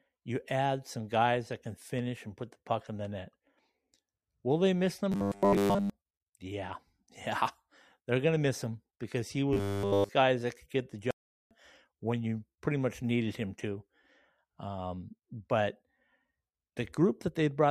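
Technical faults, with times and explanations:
5.12–5.90 s and 9.53–10.10 s, robotic sound from repeated short buffers: a rigid, metallic 100 Hz buzz covers most of the first span and all of the second, likely from a roughly 10 ms block replayed while fresh audio was late. A spectrogram shows flat, evenly spaced harmonics, and the waveform shows identical repeating cycles.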